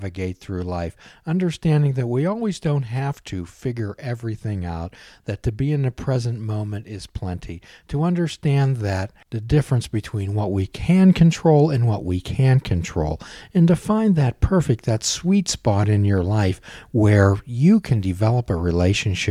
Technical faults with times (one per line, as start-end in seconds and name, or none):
none